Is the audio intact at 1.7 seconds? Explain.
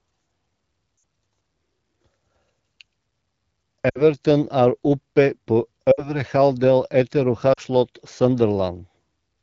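Yes, at 1.7 seconds the speech is intact, with no fault at that moment, only the light coloration of the AMR wideband (HD Voice) codec running at 12.65 kbit/s.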